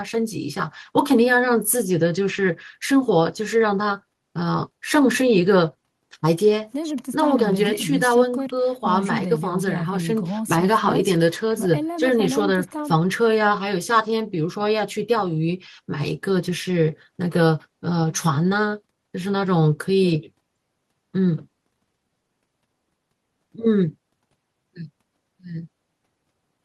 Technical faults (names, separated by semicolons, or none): none